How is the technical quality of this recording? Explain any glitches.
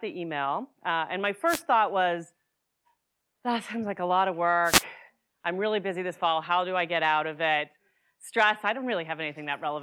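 The recording has two brief dropouts of the same kind. Wireless microphone noise hits occur from 1.47 to 1.62 s, just before "thought was", and from 4.64 to 4.84 s, between "like a lot of" and "I'm really busy this". The FM radio link momentarily fades as reflected signals cancel the direct one, so the receiver's own noise surges up over the speech. Each lasts roughly 0.15 to 0.2 s and is heard as a quick swish of static.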